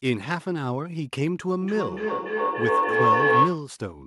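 At 1.62 s a feedback howl begins and runs until 3.72 s. It sounds like a tone near 1 kHz that swells, with the loop repeating roughly every 0.3 s. At its peak it sits about 7 dB above the speech. Two devices on the same call were sharing one room. Each trip from microphone to loudspeaker and back added level. The repeats grew and narrowed to the loop's favoured frequency.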